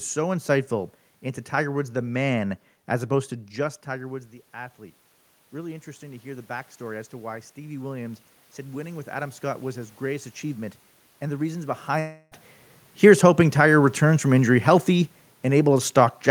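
A speech recording with three system faults. Automatic gain rising runs from 3.60 to 10.36 s, just after "man as opposed to". The input fell by about 15 dB as the talker moved back around three and a half seconds, and the gain control slowly raised its gain by about 10 dB. The voice and room noise swell together over several seconds instead of jumping back. At 11.99 to 12.33 s, after "and the reasons", the sound turns into a fading buzz or hiss for about 320 ms and then resumes with that stretch missing. This is likely a long network dropout, where the receiver filled the gap by extending the last sound. Automatic gain falling runs from 12.89 s to the end. The gain control judged the input too loud, or its background too strong for its starting gain, and pulled its gain down, so the voice sinks along with its background.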